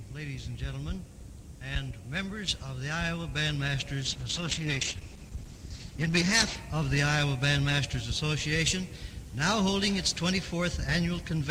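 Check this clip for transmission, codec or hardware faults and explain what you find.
One fault is present. A call bitrate drop runs from 4.05 to 6.67 s. The bandwidth estimate fell and the encoder switched to a much coarser coding mode, which fits a fall from about 48 kbps to roughly 11 kbps. The sound turns rough and muffled, with highs cut, for about 2.5 s before recovering.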